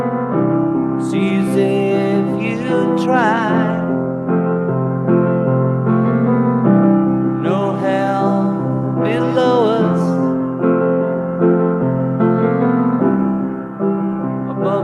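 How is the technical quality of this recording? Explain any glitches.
No glitches turn up anywhere in this recording. Nothing in it stands out as a technical fault that needs explaining.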